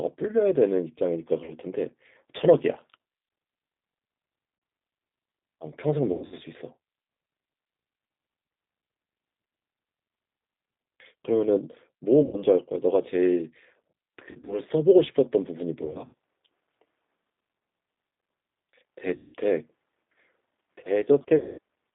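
From start to finish the speech sounds slightly rough and synthetic, with plainly audible coding damage. The sound is confined to a telephone band of about 200 Hz to 3.7 kHz, so it is thin and lacks any top end. This is the G.729 codec, here G.729A at 8 kbit/s. Rather than sending the waveform, it sends a model of the vocal tract, a pitch value and a few pulses per frame, and the rebuilt speech carries that coarse, artificial grain.

At 1.44–1.54 s, 4.58–4.62 s, 6.12–6.39 s, 12.23–12.40 s, 14.31–14.60 s, 15.85–16.14 s, 19.16–19.35 s and 21.38–21.59 s, the speech smears into a buzzy, stretched tone that fades, and it stays weak or distorted briefly after each event. This is VoIP packet loss concealed by the speech codec. Audio went missing, from 40 ms at the first two points up to 200 ms at the last. At 6.12 s, 14.31 s and 15.85 s the gaps are scattered rather than continuous. The decoder covered each gap by repeating its last pitch and filter at falling gain. 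Because each frame builds on the previous one, the recovery lags behind the returning audio.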